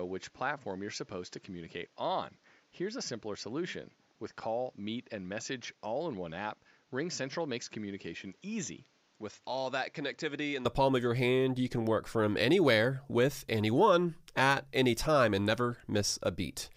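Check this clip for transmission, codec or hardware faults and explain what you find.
Input switched to a poorer device, from the start to 10.65 s: for this opening stretch the speech most likely comes through a lesser microphone or a headset's call profile, which passes nothing above 7.6 kHz, sits roughly 10 dB quieter and carries its own noise floor some 35 dB down. The result is a dull, boxy sound that opens up abruptly, with no gap, right before "palm of your hand" as the better input takes over.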